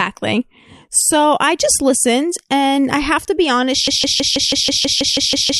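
At 3.88 s the speech locks into a broken-record loop: a 0.16 s fragment repeats exactly, back to back, eleven times until the clip ends. The likely cause is a stalled player or stream resending its last buffered piece, so the intervening audio is lost.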